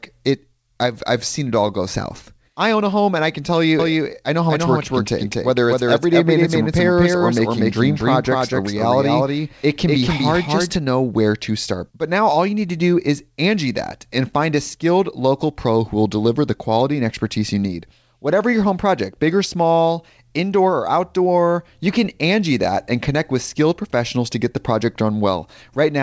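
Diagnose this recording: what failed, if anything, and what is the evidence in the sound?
A doubled audio track runs from 3.79 s, just after "and I can tell", to 10.75 s, just before "know where to start." A second full-band copy of the speech trails the original by roughly a fifth of a second at about equal level. It has no reverb tail or room colouring and cuts in and out abruptly. That points to a capture or monitoring stage, most likely a second, slower path feeding the same mix, or an edit holding two misaligned copies. Both copies share the call path's 8 kHz ceiling.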